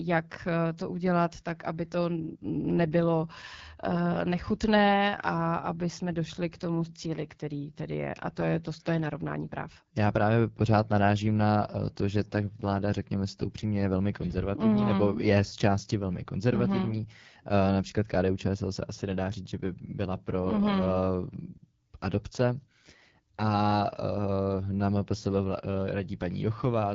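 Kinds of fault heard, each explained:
AMR wideband (HD Voice) codec: the speech passes through AMR-WB at 8.85 kbit/s, one of its two lowest rates, so it sounds rough and raspy. A spectrogram shows detailed energy only to 6.4 kHz, then a smeared noise band up to 7 kHz and nothing above.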